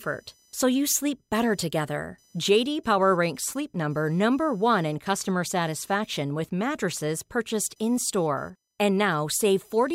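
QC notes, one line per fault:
Throughout, computer activity noise: a faint buzzing chirp sits under the speech for the whole clip, pulsing at around 1 kHz and roughly 40 dB below the speech level. Its rise and fall follow the computer's workload rather than the talker, because processor, graphics or mouse activity draws changing current through the ground shared with the audio circuit, and those ground shifts ride into the signal as noise.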